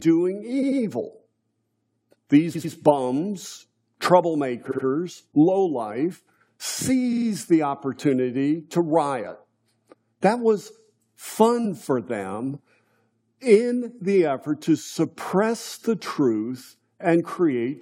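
Repeated frames cause stutters at 0.62, 2.54, 4.70 and 7.12 s, the last just before "the opportunity to riot". Each time, a block of compressed audio (about 93, 93, 70 and 46 ms, consistent with a few codec frames) plays again twice, or three times at 7.12 s, adding 0.19, 0.19, 0.14 and 0.14 s. Unlike a dropout, nothing is lost. Unlike an echo, the copies are identical, not fading.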